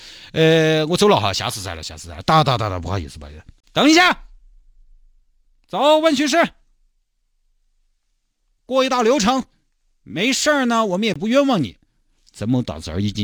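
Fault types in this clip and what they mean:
Sample clock jitter: an unsteady converter clock of roughly a few microseconds adds a faint hiss around 35 dB down, rising on loud, bright speech and gone in pauses.
Gap at a join of encoded pieces: separately encoded segments joined untrimmed leave short silences, about 33 ms at 3.60 s and 21 ms at 11.14 s, before speech resumes.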